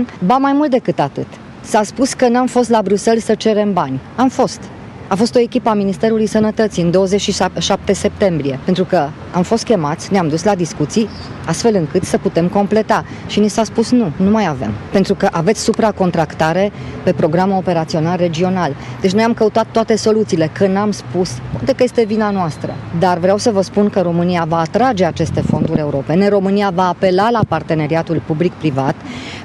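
No technical faults are audible anywhere in the recording, and the signal stays steady and uninterrupted throughout.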